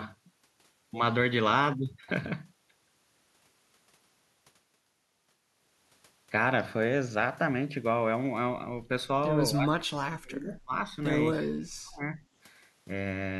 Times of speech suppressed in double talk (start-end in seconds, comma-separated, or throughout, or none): 9.54-10.73, 11.33-12.19